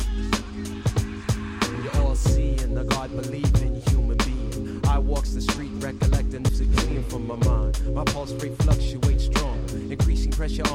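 No technical faults to report anywhere in the clip.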